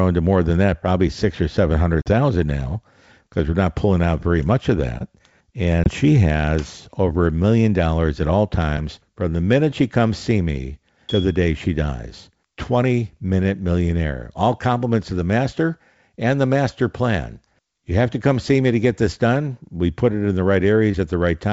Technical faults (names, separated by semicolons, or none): packet loss on an ADPCM call